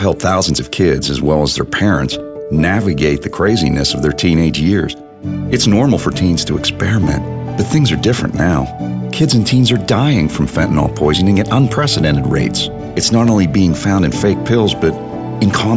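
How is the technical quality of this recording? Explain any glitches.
No audible technical faults anywhere in the recording, so there are no glitches to explain.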